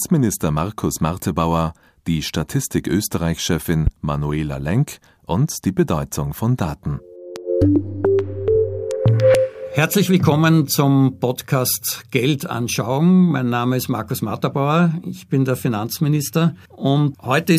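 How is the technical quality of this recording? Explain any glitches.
Two loud pops break into the recording, at 3.87 to 3.90 s and again at 7.36 to 7.39 s. Each is a single sharp, brief crack lasting under 30 ms. The first jumps roughly 15 dB above the surrounding sound and the second roughly 10 dB, while the audio continues unbroken beneath them. The likely cause is a sudden electrical step or spike, from a plug, switch, static discharge or driver glitch, added into the signal path and shaped by the circuitry downstream into a short percussive burst.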